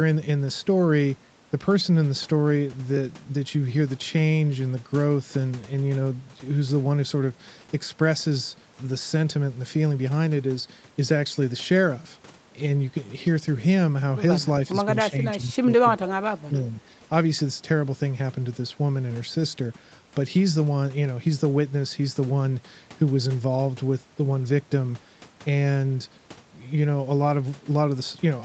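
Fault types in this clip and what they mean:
Speech suppressed in double talk: the echo canceller likely mistook overlapping talk for loudspeaker echo and turned the talker down too. The speech dips about 10 dB briefly at 14.71 to 14.88 s, then sinks in patches by up to about 20 dB from 15.1 to 17.05 s.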